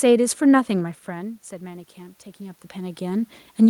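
A speech clip with automatic gain rising from 0.68 s to the end: after the input falls by about 16 dB, the gain creeps back up, swelling voice and room noise together. The waveform envelope widens steadily, and the spectrogram's noise floor brightens alongside, unlike the talker's movements near 1 s and 2.5 s.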